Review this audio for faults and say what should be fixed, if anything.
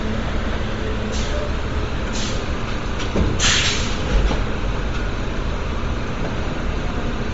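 Throughout the clip the sound has a grainy, breathy edge, with nothing above 7.7 kHz. This is likely Bluetooth LC3 compression at a low bitrate, which fits about 32 kbps in 10 ms frames. The codec discards upper spectral detail and fills gaps with noise. To prevent it, record over a wired path or raise the LC3 bitrate and sample rate.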